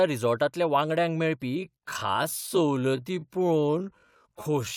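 Time-stretched section from 1.53 s onward: the pace abruptly slows to 0.6 times with pitch unchanged, sounding dragging, likely from repeated short pieces.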